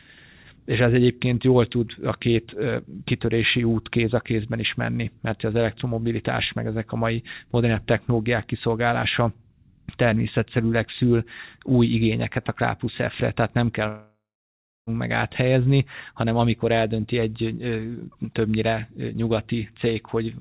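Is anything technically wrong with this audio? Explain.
Yes. From 13.88 to 14.90 s, after "tehát nem kell", a fading buzz decays into about 0.67 s of near-silence, then "meg áthelyezni hanem amikor" resumes with roughly a second gone. This is likely a long network dropout, where the receiver stretched the last sound over the lost packets before giving up. The band-limited sound, with nothing above 4 kHz, fits a G.711 call path.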